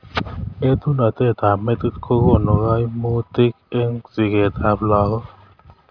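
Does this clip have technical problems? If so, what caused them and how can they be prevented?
No, nothing wrong is audible here, so there is no cause to trace and nothing to prevent.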